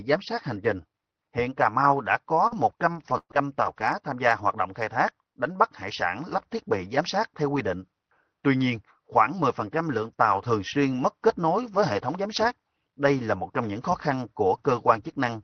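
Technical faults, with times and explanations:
2.47–2.54 s, short stall from a late packet: the sound is held about 34 ms while the buffer waits, then resumes where it left off with nothing lost, unlike a loss burst.
2.51–2.57 s, 2.93–3.13 s, 3.05–3.11 s, 3.30–3.36 s, 3.60–3.66 s and 3.78–3.84 s, lost packet rebuilt from error correction: each 60 ms stretch plays from a rougher low-bitrate backup copy, so it sounds noisier but has no gap. The last one ends just before "tham gia hoạt động".
3.18–3.33 s, burst of packet loss: the last sound is stretched and fades for about 120 ms, including about 50 ms of silence. Playback then jumps ahead, skipping about 120 ms, unlike the rebuilt packets, which leave no gap.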